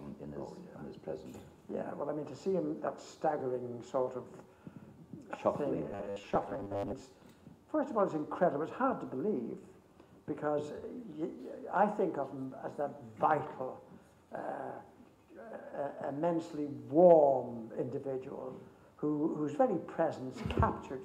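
From 5.92 to 7.03 s the audio turns into a rigid, metallic buzz at a fixed 100 Hz. This is robotic sound from repeated short buffers: a 10 ms slice is looped to fill gaps, with roughly half the audio repeated rather than new, most likely because audio was arriving too seldom. Unlike a plain dropout or stutter, nothing goes silent, and the steady 100 Hz pitch, set by the 10 ms repeat length, gives it away.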